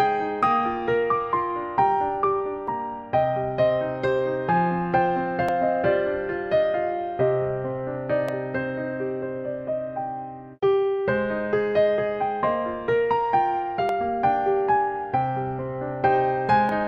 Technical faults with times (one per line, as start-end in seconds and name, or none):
2.68-16.69 clock drift buffer slips